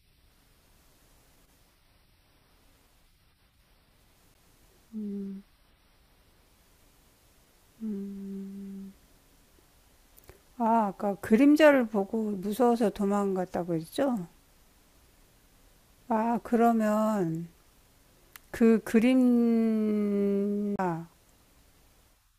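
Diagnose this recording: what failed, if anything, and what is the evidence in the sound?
CD skip in playback: ticks at 4.34 s and 20.76 to 20.79 s as the laser jumps tracks, shifting the speech; the waveform shows a gap, then a discontinuity.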